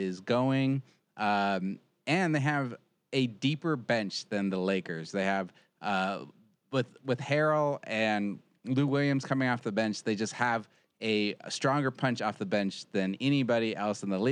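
No technical faults can be heard in this recording.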